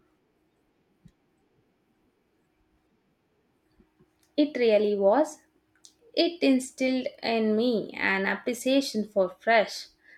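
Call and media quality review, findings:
No audible faults found.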